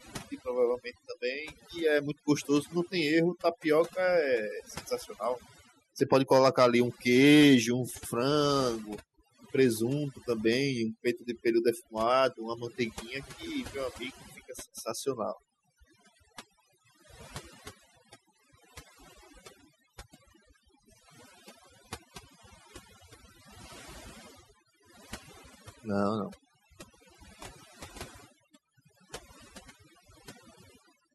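A speech recording runs the whole way through with a background that drops and breaks up into twinkling, warbling specks. The fault is overdone noise removal: a noise reduction stage set too aggressively pulls individual frequency bands down or off whenever they sit close to its noise estimate, so the softer parts of the voice are stripped along with the noise.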